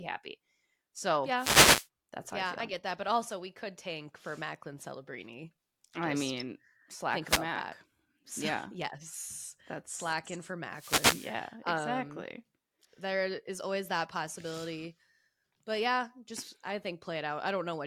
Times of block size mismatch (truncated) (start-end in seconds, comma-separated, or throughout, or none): none